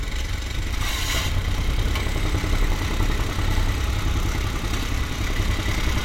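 From 1.21 to 5.75 s, about four clicks recur every 1.51 s, likely clock drift buffer slips: two mismatched clocks, roughly a thousand ppm apart, force roughly 70 samples to drop or repeat. Each shows as a waveform discontinuity and a thin vertical broadband line on a spectrogram.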